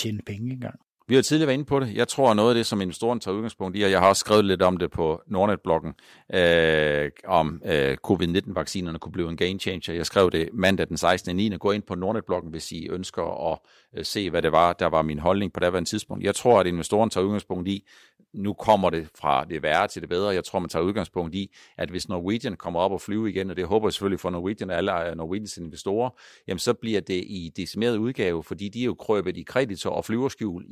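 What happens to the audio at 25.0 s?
Nothing goes wrong at 25.0 s; the speech carries on intact through that moment, with no dropout, click, distortion or other fault to be heard.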